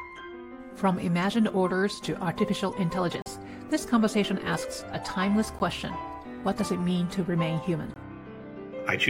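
Blocks of digital silence drop in at 3.22–3.26 s (40 ms), 5.59 s and 7.94–7.96 s: likely the output buffer went unfilled, so the sound cuts hard to silence.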